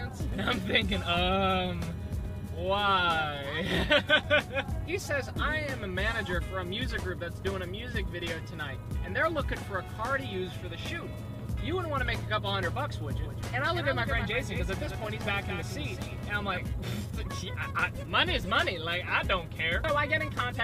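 From 13.17 to 16.57 s, a doubled audio track: a second full-band copy roughly 200 ms late and about 10 dB quieter, likely from a slower capture path, lacking the decay of echo.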